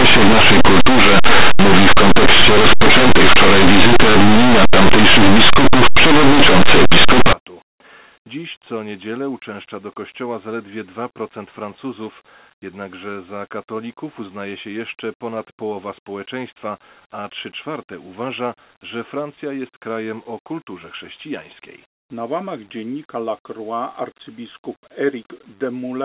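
From 0 to 7.33 s there is linear audio read as companded. Plain linear 8-bit samples are being expanded as mu-law codes, so small values just on one side of zero map to near full-scale outputs, which gives a loud, harsh distortion across that whole stretch.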